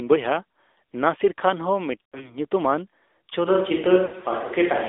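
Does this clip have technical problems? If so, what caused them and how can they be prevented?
Yes. The speech passes through the AMR narrowband mobile codec for the whole clip. Nothing outside roughly 300 Hz to 3.6 kHz survives. The vocal-tract model plainly buzzes and sounds synthetic, which fits a mid-rate mode near 10 kbps. To prevent this, record locally or use a wideband or full-band codec.

Lost AMR speech frames occur from 2.07 to 2.47 s and again from 4.06 to 4.25 s. The decoder repeats the last good pitch and spectrum at falling gain, so the sound stretches, warbles and dips. The longest gaps are 80 ms and 60 ms, which fits runs of three or four failed 20 ms frames. To prevent this, improve radio coverage or use a more robust codec mode with stronger error protection.

From 3.49 s to the end, the voice suddenly turns roomy and hollow, with thinner bass. The level barely changes. 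Faint room noise sits well below the speech. The likely cause is a switch to a distant microphone after the close one dropped out. To prevent this, check the close microphone's connection and battery, and monitor it throughout.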